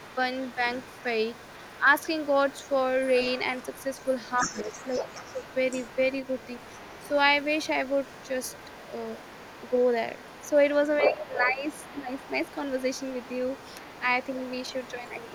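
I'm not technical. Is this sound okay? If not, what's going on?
No. Two problems are audible in this speech recording.

The first is the other side's voice leaking through. For the entire clip, a second, quieter voice sits faintly underneath the main talker, well below them. This is likely because the talker's device played the far end of the call through a loudspeaker, the microphone picked it up, and the echo canceller, the part meant to remove that pickup, left some of it behind.

The second is speech suppressed in double talk. At 4.44 to 5.39 s, 11.09 to 11.65 s, and briefly at 12.02 to 12.1 s, the main voice suddenly dips, for about half a second in the first two cases and a split second in the last. The likely cause is both sides talking at once. The echo canceller couldn't tell the talker apart from the loudspeaker echo, so it turned everything down together.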